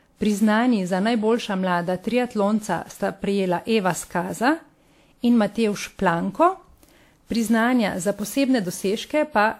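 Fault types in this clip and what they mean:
Generation loss: the speech sounds swirly, hollow and smeared, with soft consonant attacks and nothing above 19.3 kHz. The likely cause is WMA encoding repeated around seven times at what sounds like 96 kbit/s, each pass re-quantising on a shifted frame grid.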